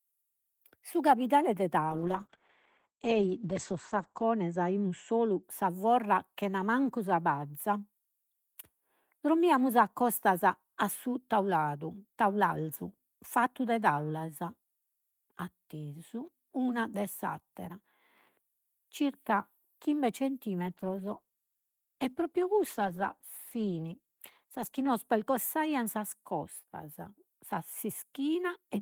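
A call bitrate drop at 1.91 to 5.49 s starves the encoder, which sounds like a fall from about 32 to 10 kbps. The speech turns muffled above 8 kHz and rough. A milder drop at 20.61 to 24.97 s, nearer 13 kbps, roughens it again.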